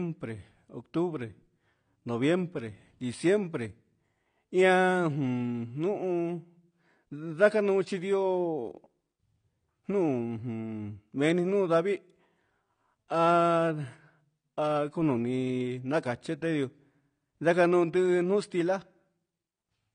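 Speech clip with a dull, smeared top end the whole way through: nothing above about 9.8 kHz, and the sibilants come out warbly and fizzy. That's likely AAC compression, and the damage is plain enough to point to a low bitrate around 32 kbps.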